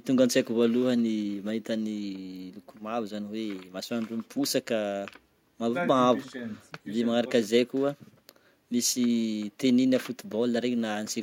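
No technical faults are audible anywhere in this recording.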